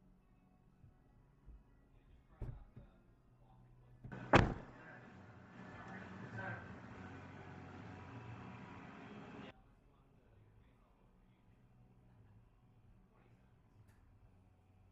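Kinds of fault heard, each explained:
Input switched to a poorer device: From 4.12 to 9.51 s the sound dulls, with nothing above 7.6 kHz. Level shifts by about 5 dB, and faint new background noise appears. Another microphone likely took over.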